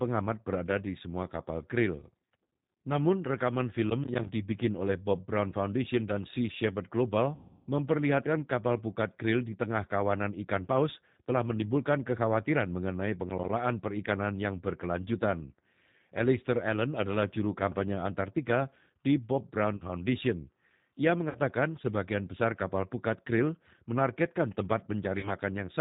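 G.729 codec damage runs throughout this speech: the 8 kbit/s coder rebuilds the voice from a vocal-tract model and sparse pulses, so nothing above 4 kHz survives and the voice sounds rough and synthetic.

Processor overload crackle hits from 3.9 to 4.29 s, just before "dibikin oleh". Short audio buffers of around 10 ms repeatedly missed their deadlines and dropped to silence, leaving gritty, tearing crackle.

VoIP packet loss concealed by the speech codec follows from 7.35 to 7.67 s, just before "memperlihatkan kapal pukat krill". The decoder filled 320 ms of missing audio by extrapolating from its last pitch and filter, producing a fading smear of buzz or coloured noise.

Processor overload crackle returns from 13.3 to 13.49 s, between "telah menimbulkan kekhawatiran mengenai" and "perikanan yang berkelanjutan", again as crackle from missed buffers that fell silent.

Packet loss concealment recurs at 19.77 s (40 ms), 21.29 s (60 ms) and 25.19 s (40 ms), each a brief fading blur where the voice stays weak or distorted.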